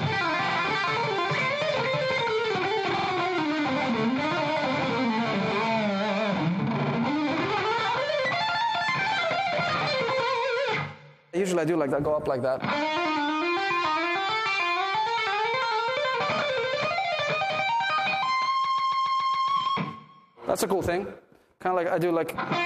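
Repeated frames make the audio stutter at 2.97 s, 6.81 s and 18.65 s, where blocks of 46 ms, 70 ms and 139 ms replay two, two and six extra times. Unlike a dropout, nothing is lost. The sound just lengthens, by 0.84 s at the last.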